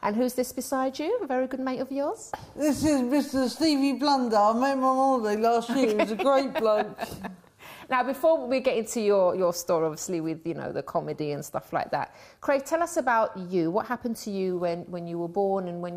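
From 3.26 to 3.76 s a stuck bit adds grainy noise with an error step of about -50 dBFS, likely from a faulty data line or converter.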